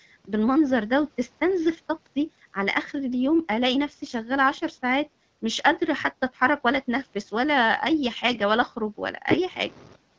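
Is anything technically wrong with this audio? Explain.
Yes. From 8.26 to 8.37 s the speech turns briefly hoarse and gargly, the sound of AMR bit errors on a weak link, heard against a wideband call codec that otherwise sounds clear. The lightly protected bits of the affected frames arrived flipped at an error rate of a few percent, while the checksum still passed. The decoder therefore placed its excitation pulses wrongly and used slightly wrong gain and spectral values. Unlike a lost frame, there is no gap or smoothed-over repeat. Pitch and level hold, but the texture goes scratchy for about five 20 ms frames.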